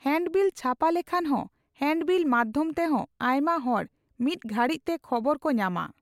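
No technical faults can be heard anywhere in the speech recording, and the signal holds steady throughout.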